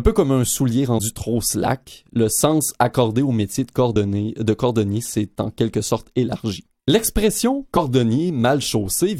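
At 0.98 s, 3.95 s and 7.76 s, compressed frames are skipped. Whole 23.2 ms frames never reach playback. The speech jumps ahead by about 50 ms, then about 20 ms, then about 50 ms.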